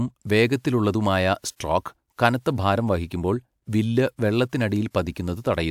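No audible technical fault turns up anywhere in this speech recording.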